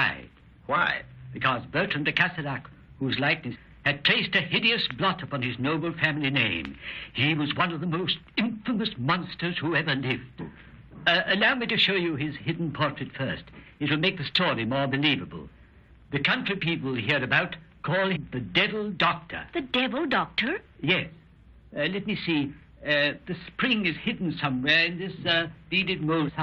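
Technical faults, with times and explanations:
3.54–3.57 s, 18.15–18.17 s and 26.27–26.30 s: damaged data in a compressed stream. Corrupt frames make the decoder lose sync, producing a brief glitch.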